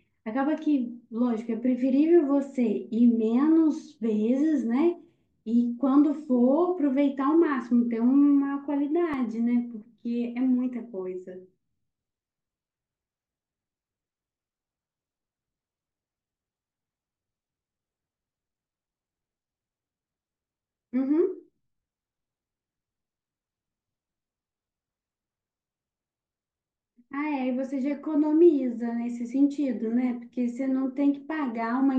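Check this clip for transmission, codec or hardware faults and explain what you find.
One fault turns up in the speech: a brief underrun with held sample at 9.13 s. The sound freezes for about 2.9 ms, flattening out with almost no click as it stops, then resumes. The output buffer briefly ran dry, and the converter held its last sample value rather than dropping to zero. The gap spans 128 samples. Because a few milliseconds of live audio were lost during the stall, the join on resumption is discontinuous.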